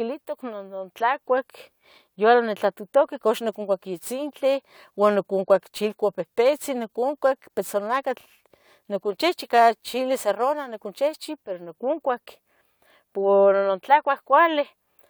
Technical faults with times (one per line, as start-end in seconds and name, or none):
3.17-11.17 crude rate conversion